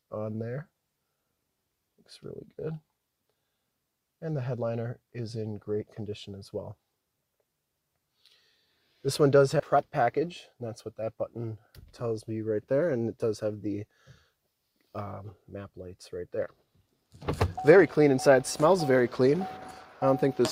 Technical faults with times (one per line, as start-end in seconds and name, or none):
9.59 skip ahead
9.75-11.38 jitter buffer speed-up